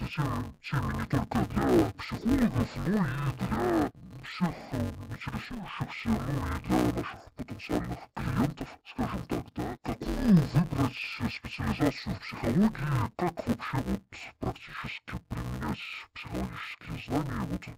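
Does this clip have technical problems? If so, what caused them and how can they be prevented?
Yes. Throughout, interleaved audio was read as planar in 5.33 ms blocks, which fits a 256-sample block, so the speech sounds dull and robotic with a 188 Hz buzz. Prevent it by declaring the sample layout consistently at every interface between the decoder and the playback path.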